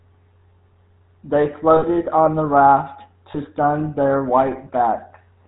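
GSM full-rate codec, throughout the clip: the speech is rebuilt from a vocal-tract model driven by coarsely spaced excitation pulses, with nothing above 4 kHz. The result is a plainly audible buzzy, gravelly roughness and a muffled top, consistent with 13 kbps coding.

Lost GSM frames, at 1.76 to 1.84 s and 3.32 to 3.37 s: missing frames were filled by repeating the last good frame, giving a brief rough, metallic ring. The first gap, about 60 ms, suggests three dropped frames; the second, about 20 ms, one.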